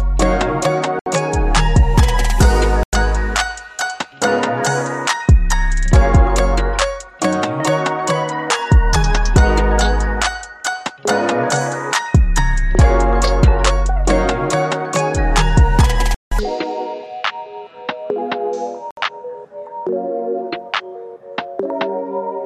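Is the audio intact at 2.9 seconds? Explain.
No. A Bluetooth stall runs from 2.83 to 2.93 s, so 2.9 s falls inside a 97 ms gap of silence. The cause is likely radio interference that delayed packets on the wireless link. The receiving end's buffer emptied before the missing data could be retransmitted, so playback stopped outright. The sound drops abruptly to nothing, with no fade, and then picks up again once the delayed packets arrive.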